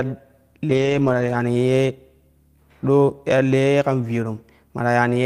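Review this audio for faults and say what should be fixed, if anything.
Lost packets rebuilt from error correction, 0.69 to 1.35 s: about 340 ms of speech sounds rougher and noisier, decoded from low-bitrate copies carried in later packets, which fits around seventeen lost 20 ms packets. To prevent it, reduce packet loss on the network path, for example with a more stable connection or jitter buffering.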